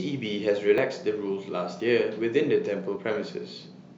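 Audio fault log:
0.78 s, 1.80 s, 2.96 s: dropped buffer (overrun). Each is a small jump ahead, about 20 ms missing. Likely samples overwritten before being read.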